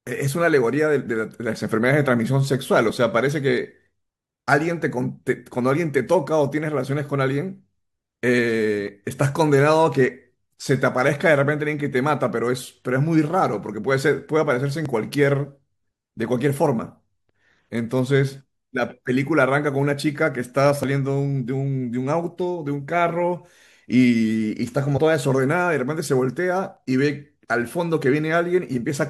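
A speech recording with small skips at 8.88, 14.86, 20.84 and 26.77 s, spaced about 6 s apart. Each drops roughly 20 ms and butts the two sides together, likely audio missing between chunks, showing as abrupt waveform discontinuities and thin vertical seams on a spectrogram. From 24.96 to 24.98 s there is a brief glitch from damaged data in a compressed stream, where the decoder loses sync.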